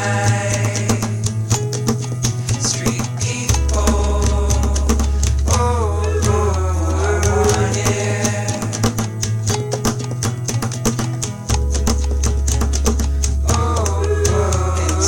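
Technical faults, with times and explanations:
Throughout, USB whine: a faint, steady high-pitched tone sits at 8 kHz, strongest at its 16 kHz multiple, roughly 40 dB below the sound. It comes from the USB bus drawing current in 125-microsecond microframes, which leaks into the audio through shared power or ground.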